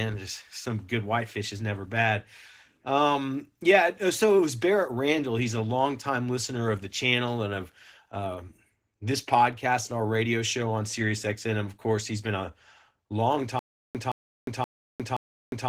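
Opus voice compression runs throughout: coarse linear-prediction coding with a thin upper layer leaves the speech hoarse and slightly robotic, consistent with roughly 16 kbps. Stutter with silent gaps starts at 13.59 s and lasts to the end. A 168 ms fragment repeats four times every 525 ms, with 356 ms of digital silence between, likely from a stalled stream.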